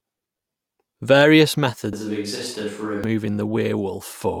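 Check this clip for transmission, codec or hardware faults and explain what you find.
One fault is present. A switch to a distant microphone occurs from 1.93 to 3.04 s. The close microphone's feed likely dropped out, leaving a pickup farther from the talker. The speech abruptly turns roomy and hollow with thinner bass at roughly the same level, with faint room noise about 35 dB below it, then snaps back.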